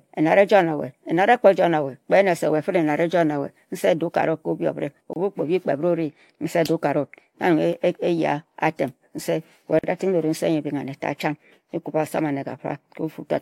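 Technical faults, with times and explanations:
5.13 to 5.16 s and 9.79 to 9.84 s: gap at a join of encoded pieces. The speech was encoded in separate segments and joined without trimming, so each join keeps one segment's padded final frame and the next segment's encoder start-up delay. This inserts a silence of about 28 ms at the first join and about 45 ms at the second. The speech drops out abruptly, with edges softened by the codec, then resumes where it stopped.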